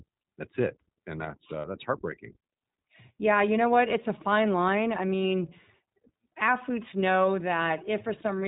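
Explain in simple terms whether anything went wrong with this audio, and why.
The speech was squeezed through the iLBC codec, a phone-grade format that throws away everything above 4 kHz and rebuilds each short slice of sound separately. That is why the whole clip sounds muffled, slightly rough and a little artificial.

At 1.62 to 1.65 s, one piece of data went missing. These are lost iLBC frames: the decoder covered the 20 ms gap by repeating the last bit of sound with some added noise, giving a brief buzzy smear before the speech resumes cleanly.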